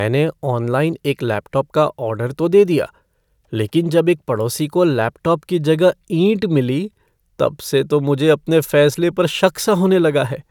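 Nothing in this speech recording stood out as a technical problem on listening.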